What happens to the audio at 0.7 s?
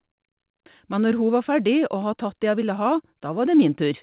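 At 0.66 to 0.68 s there is a skip ahead: roughly 0.7 s of speech was dropped, probably discarded by an overflowing jitter buffer, and playback jumps straight to later audio. Unlike a dropout, there is no silence or concealment filling the jump.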